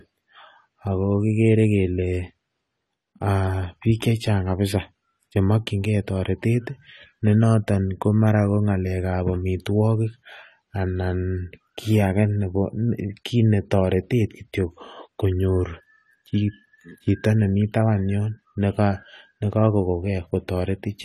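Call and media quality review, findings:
AAC compression, throughout 0 to 21 s. Speech dull and smeared, with a warbling, fizzy texture on sibilants and sustained sounds. Nothing above 14.1 kHz. Likely AAC-LC at a low rate, fitting roughly 32 kbps. Coarse quantisation against a hearing model strips the top band and leaves spectral holes or noise-filled bands.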